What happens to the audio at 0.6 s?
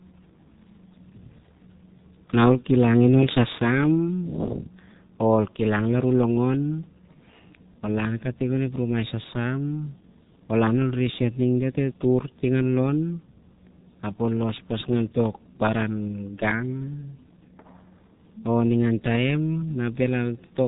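At 0.6 s the speech carries G.723.1 codec damage, present across the whole clip rather than as a single event. The codec squeezes speech into 30 ms frames and rebuilds it from a slowly updated vocal model, with a heavy loss that fits a bitrate of about 6.3 kbit/s. Nothing above 3.8 kHz survives, so the speech sounds muffled and hoarse, and consonants smear into their neighbouring sounds.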